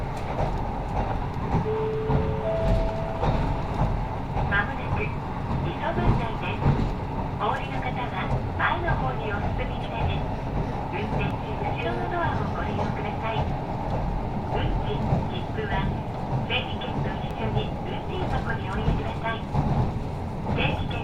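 At 11.31 s and again at 17.31 s, exactly 6 s apart, an overlap between stream segments trims a few milliseconds at a segment boundary, so the waveform jumps abruptly. Each sounds like a tiny click or skip, seen as a thin vertical broadband line on a spectrogram.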